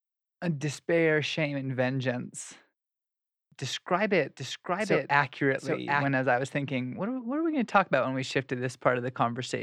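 Speech, with a doubled audio track from 4.37 to 6.05 s, between "describe it" and "as I was thinking": a dry, about 5 dB quieter copy trails roughly 0.7 s behind, likely from a slower second capture path.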